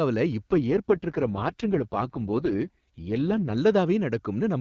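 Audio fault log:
0.52–3.58 s, AMR rate drop: the speech turns rough, raspy and synthetic at full bandwidth with no gap, which fits AMR-WB falling from 23.85 to 6.6 kbit/s.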